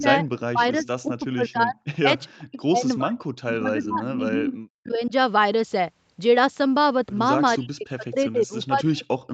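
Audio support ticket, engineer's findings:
Speech ducks and breaks into pieces, 0.0–3.24 s, 3.59–5.12 s and 7.58–9.33 s; deepest dips around 40 dB, about 35 dB in the last span, with roughly a second and a half lost in each of the first two. Likely speech suppressed in double talk: the echo canceller mistook near-end speech for loudspeaker echo and attenuated it.

Faint delayed repeat of the voice, 0.79–0.89 s, a short scrap about 372 ms behind the original and roughly 25 dB down. Likely echo leak: the far end's echo canceller failed to remove residual loudspeaker pickup from its microphone signal and sent it back.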